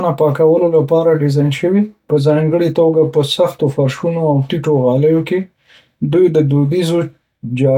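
No technical faults are audible.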